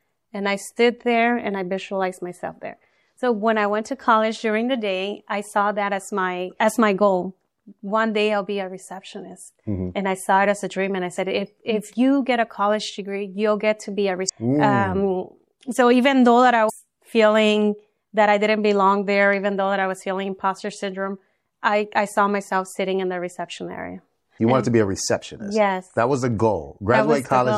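Throughout the clip the sound is watery and swirly, with dull treble and metallic chirps on bright, hissy passages. This is likely MP3 compression at a low bitrate, around 64 kbps: the encoder cuts the top end and lets weak frequency lines flicker between frames.

From 14.25 to 14.30 s and again from 16.66 to 16.70 s, brief glitches break in. This is damaged data in a compressed stream: the decoder misreads corrupted frames, loses sync, and jumps to the next valid frame header.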